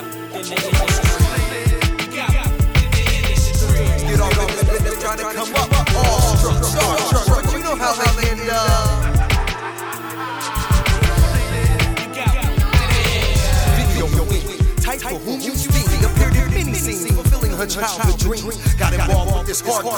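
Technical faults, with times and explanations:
Throughout, doubled audio track: every sound is followed by a dry, full-band copy of itself some 200 ms later and roughly 5 dB quieter, with no decay or room colour, most likely because the same audio was captured again through a slower path.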